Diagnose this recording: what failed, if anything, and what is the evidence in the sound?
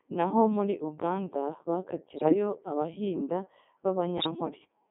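The whole recording sounds robotic and buzzy, with speech squeezed into a narrow band from about 200 Hz to 3.4 kHz. The fault is at the codec stage: a Codec 2 vocoder, heavily degrading the sound. The decoder does not keep the waveform. It rebuilds the voice from sine waves using only pitch, voicing, energy and a coarse spectral envelope. The degree of damage fits its highest, 3.2 kbit/s mode.

Two short bursts break into warbling, bleepy gibberish, from 2.14 to 2.34 s and from 4.18 to 4.31 s, with pitch, level and tone colour jumping abruptly. These are bit errors on digital voice radio, a fault at the network or radio link stage. Flipped bits at a rate of a few percent corrupt the vocoder's frame parameters, so each damaged frame is synthesised with the wrong pitch or spectrum. The first burst's length fits about nine frames hit.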